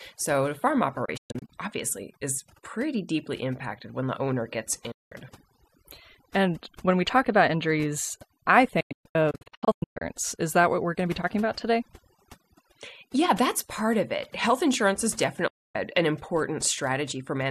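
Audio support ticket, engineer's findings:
Overdone noise removal, full length of the speech. Background pulled down, breaking into twinkling specks; quiet detail of the voice lost. Probable component: noise suppressor set too aggressive, gating individual bands near its noise estimate. Spectrogram: blotchy, isolated time-frequency islands, holes between harmonics.

Digital broadcast dropout, four events: 1.05–1.50 s, between "the farm" and "obviously is pretty", several short holes over about 0.43 s; 4.91–5.12 s, after "when the owner gets"; 8.80–10.02 s, after "talk about injuries I", broken holes across 1.2 s; 15.47–15.75 s. Longest hole within the broken stretches 120 ms. Probable component: receiver/decoder muting on lost or corrupt frames, 8 ms fades. Hole lengths step in about 24 ms units, which fits frame-based muting. Waveform: flat silent gaps with short ramps; spectrogram shows full-band vertical blank columns.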